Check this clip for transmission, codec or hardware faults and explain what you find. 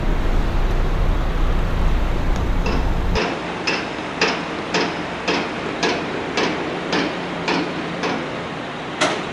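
One fault. From 3.17 s to the end, the sound abruptly turns duller and about 5 dB quieter, with nothing above 10.5 kHz and a new noise floor roughly 35 dB down, with no gap. This is likely an input switched to a poorer device, whose narrower band, own level and own noise take over.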